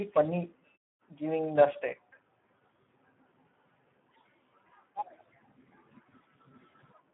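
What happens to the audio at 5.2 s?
At 5.2 s the speech is passing through a heavily starved Speex codec, as it is for the whole clip. With so few bits for the excitation, which points to a rate around 8 kbps, the codec rebuilds the speech coarsely, so it sounds hoarse and noisy. The band is confined to roughly 150 Hz to 3.4 kHz, with nothing above 3.8 kHz, giving a thin, telephone-like tone. Longer pauses fall to silence.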